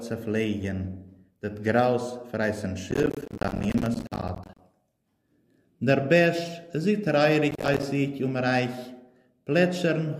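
Processor overload crackle, 2.91–4.60 s and 7.51–7.83 s: missed deadlines on what sounds like roughly 10 ms buffers leave hard-edged silent gaps, heard as gritty tearing crackle.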